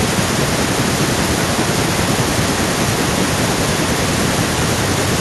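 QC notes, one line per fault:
No faults found on this speech clip.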